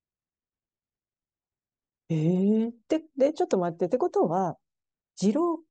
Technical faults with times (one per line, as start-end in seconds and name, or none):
none